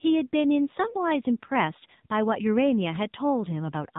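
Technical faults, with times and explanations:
Throughout, AMR narrowband mobile codec: speech sounds buzzy and plainly synthetic because a low-bitrate vocal-tract model, consistent with about 7.4 kbps, rebuilds it; a spectrogram shows a hard ceiling at 3.8 kHz with empty space above.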